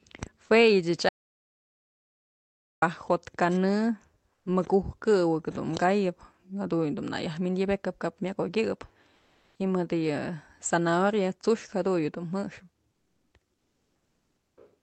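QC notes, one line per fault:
1.09 to 2.82 s, audio dropout to silence: about 1.7 s of the speech disappears into dead digital silence with no room tone, likely from the input being lost briefly.
4.33–4.45, 9.15–9.59, 12.91–13.31 and 13.55–14.57 s, comfort noise in place of the background: in each pause, the room tone is replaced by flat, featureless hiss. It's about 7 dB quieter, then about 3 dB louder, then level, then about 5 dB quieter. This is likely Opus DTX filling the gaps in the call's 8 kHz band.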